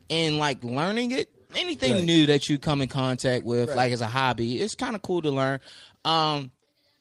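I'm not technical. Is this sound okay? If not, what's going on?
Yes, it's fine: nothing in this recording is going wrong, so you can relax about it.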